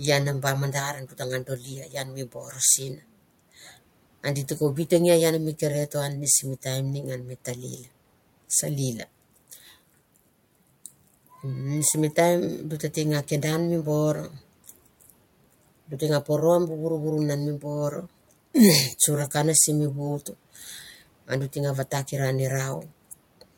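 At 0.94–1.21 s, 1.43–2.6 s, 2.79–3.03 s and 7.77–7.88 s, speech is cut by the noise suppressor, which mistook it for background and lowered it by about 10–12 dB. These stretches sound swallowed and show as dimmed spectrogram bands and a shrunken waveform.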